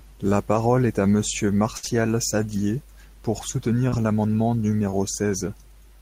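At 1.77 to 1.85 s the speech turns into a held, fading continuation of the preceding sound, then picks up further on. This is a burst of packet loss: about 60 ms never arrived, and the receiver stretched the last audio across roughly 54 ms while turning it down.

A brief smear follows straight after, at 1.85 to 1.89 s, with two more at 3.89 to 3.94 s and 4.90 to 4.94 s. Each is a short concealed packet loss, where 20, 40 and 20 ms went missing and the receiver filled the hole by extending the last sound before blending back into the real speech.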